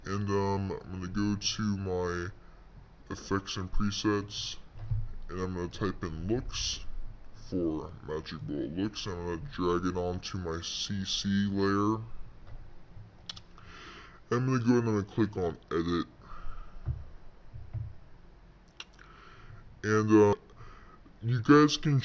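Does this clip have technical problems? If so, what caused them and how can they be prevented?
Yes. Wrong sample rate, throughout the clip: the audio plays at about two-thirds of its proper speed, with pitch lowered by about 7 semitones. Speed and pitch drop together because the samples are being read out more slowly than they were captured, with no rate conversion in between. A 0.667 ratio fits material recorded at 24 kHz but played back at 16 kHz. To prevent it, match the playback rate to the recording rate or resample explicitly at every stage.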